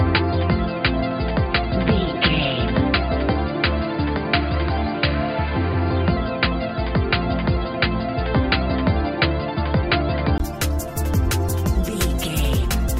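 From 0.0 to 10.4 s the sound is capped near 4.8 kHz and dull, with a faint added hiss, likely an input switched to a poorer device. A 20 ms gap at 10.4 s, then full bandwidth at unchanged level, distinguishes it from gradual filtering.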